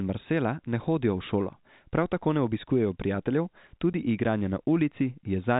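Speech carried over telephone-band G.711 coding has a packet loss filled with silence at 3.93 s: a 10 ms hard-edged hole, which fits one lost packet. Its abrupt edges set it apart from concealed loss, which would smear the gap.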